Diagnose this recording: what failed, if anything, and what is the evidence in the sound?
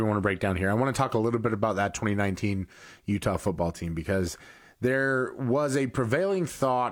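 Nothing in this speech recording points to a failure at any stage of the chain, so there's no evidence to chase and no diagnosis to make here.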